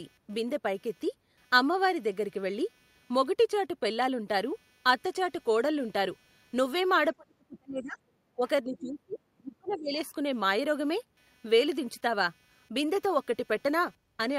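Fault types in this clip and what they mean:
Computer activity noise: Throughout the clip there is a faint buzzing texture at roughly 300 pulses per second, sitting around 40 dB below the speech. It rises and falls with the computer's own workload, not with the talker. Shifting current draw from the processor, graphics or mouse moves the ground reference shared with the audio circuitry, and that ripple gets into the microphone signal as a scratchy undertone.
Speech suppressed in double talk: At 7.13 to 7.98 s, 8.36 to 8.44 s, 8.64 to 9.21 s and 9.38 to 9.96 s the talker's speech sinks sharply. The deepest dips reach about 30 to 35 dB, and the short one near 8.4 s is shallower, around 15 dB. This is likely an echo canceller that lost track while both ends spoke at once and, unable to tell the local voice from loudspeaker echo, pulled everything down.
Other side's voice leaking through: Within that same stretch, brief foreign fragments surface at 8.76 to 8.89 s, 9.11 to 9.16 s and 9.69 to 9.75 s. 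The loudest sits about 20 dB under the speech, and the others are fainter, roughly 30 to 35 dB down. These are likely remnants of the far-end voice played over the talker's loudspeaker that the echo canceller failed to fully subtract from the microphone, so scraps of it come through.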